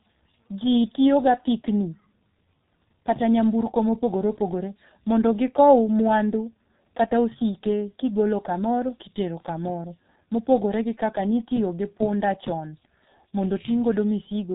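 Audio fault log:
throughout: G.723.1 codec. The speech stops at 3.8 kHz and sounds heavily muffled and hoarse, with smeared consonants. The coder rebuilds the voice from a simple model updated only every 30 ms, at a very low rate consistent with about 6 kbit/s.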